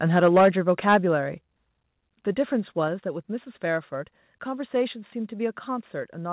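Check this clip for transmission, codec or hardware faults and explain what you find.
Two related faults affect the opening seconds of this speech, heard through a call path that passes nothing above 4 kHz, consistent with G.711 mu-law.

Microphone overload, from 0.15 to 0.97 s: input gain was likely set too high, driving peaks about 5 dB past the converter's limit. Flattened tops on around one sample in twenty give the loudest syllables a harsh, crackling edge.

Microphone volume stepped down, at 0.38, 1.38 and 2.88 s: the capture level was cut in single steps of about 2, 4 and 3 dB. Voice and background drop abruptly together each time.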